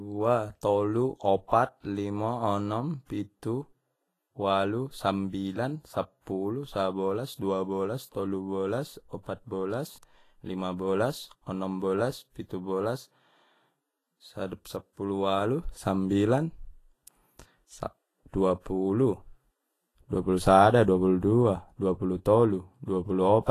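Speech with plainly audible Vorbis compression throughout, likely from a low bitrate near 30 kbps: hissy, grainy treble, blurred consonant attacks, and a spectrogram showing nothing above 14.2 kHz.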